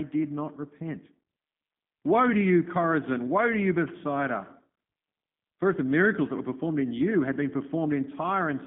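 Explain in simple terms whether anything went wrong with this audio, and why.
Throughout the speech, the sound has passed through the G.729 codec, a phone-call compression system that rebuilds the voice from a rough model instead of sending the real sound. Everything above about 3.5 kHz and below about 150 Hz is gone, so it sounds thin and muffled like a phone line. A plain narrow phone line would sound dull but natural. Here the voice is also clearly rough and slightly robotic, because it is being resynthesised.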